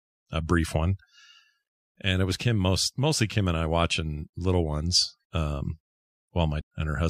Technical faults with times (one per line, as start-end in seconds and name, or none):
6.57-6.62 damaged data in a compressed stream